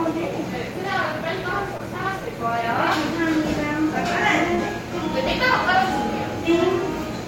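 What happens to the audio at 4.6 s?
At around 4.55 to 4.6 s there's a short concealed packet loss. About 20 ms of audio never arrived in time, so the receiver patched roughly 26 ms by stretching the preceding sound and blending back in, which leaves a quick smear or wobble.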